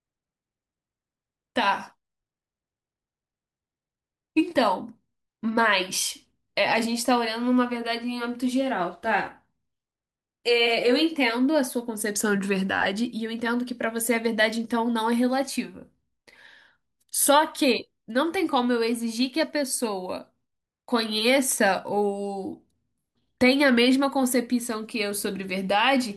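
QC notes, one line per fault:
No fault found.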